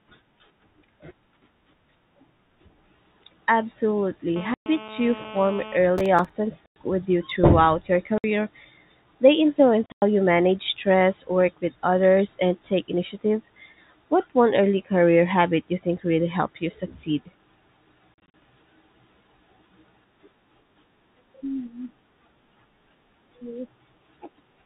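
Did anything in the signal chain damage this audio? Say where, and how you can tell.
Yes. In the analogue wiring, a nearby 2G phone in a call was rectified into the audio circuit: a steady, raspy 217 Hz GSM phone buzz, about 17 dB below the speech, from 4.36 to 5.77 s.

On the network, packets were lost and replaced by silence. Packet loss filled with silence cuts hard-edged holes at 4.54–4.66 s, 6.66–6.76 s (before "with you throughout your"), 8.18–8.24 s (after "with you throughout your"), 9.86–10.02 s (before "you manage stress work") and 18.14–18.34 s. The holes come in 20 ms steps.

In the driver or buffer stage, the processor kept missing deadlines on roughly 5 ms buffers. Each miss left a short silent gap, and together they make processor overload crackle, a gritty tearing from 5.98 to 6.30 s.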